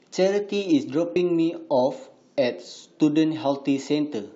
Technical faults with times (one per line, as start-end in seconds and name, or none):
1.15 compressed frames skipped